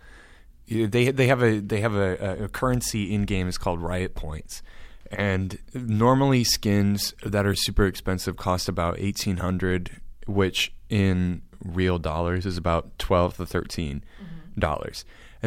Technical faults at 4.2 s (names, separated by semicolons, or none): none